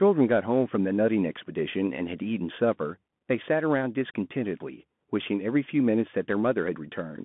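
Bluetooth CVSD headset codec, throughout: the speech passes a narrow 150 Hz to 3.5 kHz band with nothing above 3.8 kHz, its one-bit steps leaving scratchy sibilants and granular hiss.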